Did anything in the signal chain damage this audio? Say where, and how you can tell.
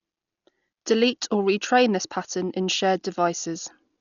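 Yes, at the codec stage: heavy Dolby Digital compression, likely at a low bitrate around 40 kbps, throughout the speech. Nothing reaches above 6.9 kHz, so it sounds dull, and starved frequency lines refilled with dither noise leave a rough, fluttering hiss around tones.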